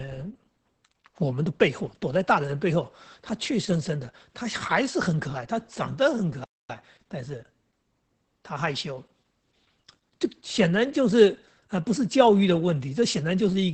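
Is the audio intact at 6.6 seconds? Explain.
No. A playback stall runs from 6.44 to 6.70 s: the output drops to silence for about 0.25 s, most likely because the player ran short of data or its thread was blocked, before resuming. Opus voice compression also affects this moment, as it does throughout the clip. The speech is coded at 10 kbps in SILK mode, limited to an 8 kHz band, and the coarse excitation makes it sound muffled, hoarse and slightly robotic.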